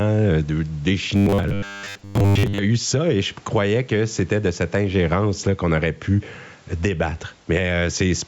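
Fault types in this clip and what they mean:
Gain pumping: the speech level swings by about 10 dB, unlike a gate, which would silence the gaps; likely an overdriven input hitting a fast limiter.
Robotic sound from repeated short buffers: from 1.16 to 2.58 s, just before "a eu ça et", the speech becomes a rigid metallic buzz at a fixed 100 Hz, unlike codec warble, which shifts in pitch. This fits audio likely arriving too seldom while roughly 10 ms chunks are repeated to cover most of that stretch.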